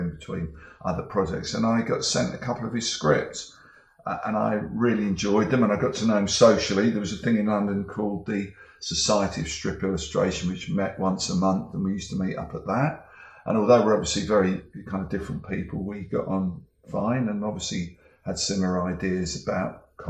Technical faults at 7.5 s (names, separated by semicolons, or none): none